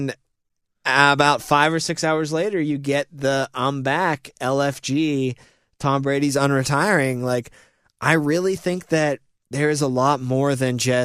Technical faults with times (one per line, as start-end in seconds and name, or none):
none